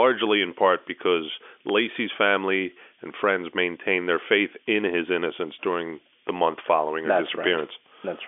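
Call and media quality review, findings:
Loud pop, single sharp transients at 1.69–1.72 s (after "in part because", before "family and friends maintained") and 6.29–6.31 s (after "in his innocence during", before "month following her"), about 10 dB and 15 dB over the speech. Likely a voltage step from a plug, switch or driver glitch. Speech continues underneath with no gap, unlike a dropout, and it is a single pulse rather than a crackle burst. The pops sit on the G.711 telephone band, with nothing above about 3.7 kHz.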